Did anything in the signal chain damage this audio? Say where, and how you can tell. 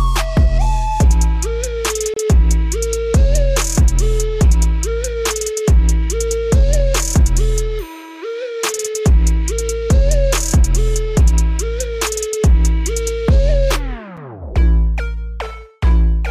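Yes, there is a gap between stream segments at the streaming and playback stage. Hard-edged silences interrupt the sound at 2.14 to 2.17 s (about 28 ms) and at 14.17 s (a brief 6 ms hole). The waveform drops abruptly to a flat, near-silent line, and the spectrogram shows a thin blank vertical stripe with sharp edges. Timestamps on adjacent 6 s segments don't quite meet, so the player pads the gap with silence. No audio is lost; it's only pushed later.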